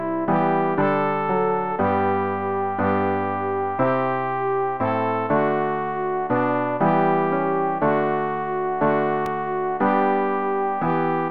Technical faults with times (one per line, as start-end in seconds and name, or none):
9.26 block of digital silence